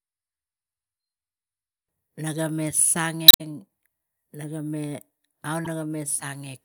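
Speech with damaged data in the compressed stream at 3.28–3.41 s and 5.64–5.67 s. Each time, the decoder misreads corrupted frames, loses sync and searches for the next frame header.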